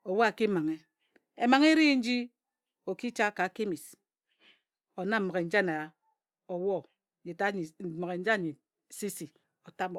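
From 0.81 s to the end, the speech carries crude rate conversion: samples were linearly interpolated without filtering, consistent with a 48 kHz to 44.1 kHz change. A faint fizz, about 40 dB down, follows loud and bright sounds, inharmonic rather than pitch-related like clipping distortion.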